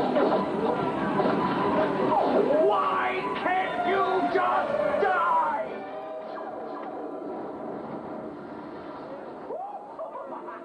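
From 5.41 to 5.82 s, zipper noise: a drop of roughly 15 dB is applied in coarse steps, about 300 per second, leaving a fast ticking buzz where a smooth fade would be silent.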